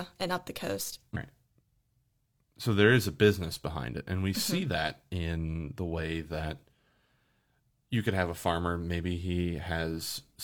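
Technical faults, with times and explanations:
No technical faults detected on this speech recording.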